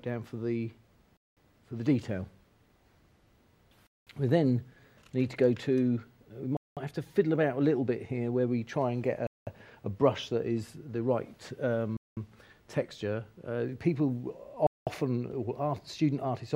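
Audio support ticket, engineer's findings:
Gap between chunks: hard-edged 200 ms silences at 1.17, 3.87, 6.57, 9.27, 11.97, 14.67 s, one after each 2.5 s chunk. Chunked delivery or padding. Strictly periodic, no audio lost, unlike random dropouts.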